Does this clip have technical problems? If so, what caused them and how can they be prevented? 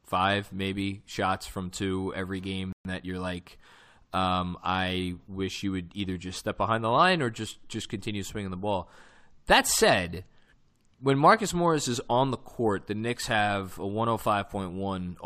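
Yes. Right after "every game" the speech cuts to silence from 2.73 to 2.85 s, a gap of about 126 ms, then resumes. This playback stall was likely the player running out of buffered data or its thread being blocked. A deeper playback buffer and a higher-priority audio thread would prevent it.

From 2.85 to 3.69 s, up to "um I wish you", the speech sounds hurried at normal pitch. This is time-compressed catch-up: small pieces are cut out and cross-faded to run about 1.15 times faster and clear the backlog. Preventing the stall removes the need for it.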